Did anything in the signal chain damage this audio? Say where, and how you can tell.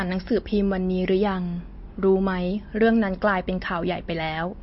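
Yes, the codec. Throughout, the speech has nothing above 5.6 kHz and sounds watery. Likely MP3 compression starved of bits, fitting about 32 kbps.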